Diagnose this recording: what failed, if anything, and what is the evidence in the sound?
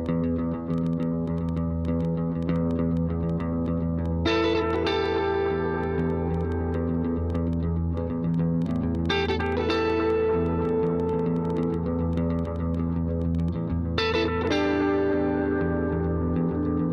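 Train of clicks from 0.06 to 13.49 s: about 70 similar ticks at an uneven 5.6 per second, roughly as loud as the sound, likely from interference in the analogue wiring or interface.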